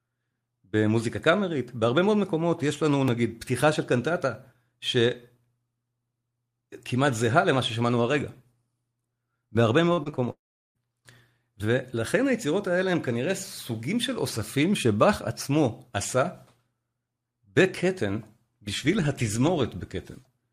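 At 3.08 s there's a block of digital silence, a 1.65 ms run of zeros that snaps in and out, so you hear a tiny tick.

From 9.93 to 10.20 s comes repeated packet loss with a robotic sound. Four holes, the longest 40 ms, about 100 ms in all, get patched by stretching the previous speech, which gives a choppy texture with pieces missing.

Then from 10.32 to 10.77 s the speech smears into a fading buzz and drops to about 380 ms of silence before resuming with that piece gone, most likely a long network dropout.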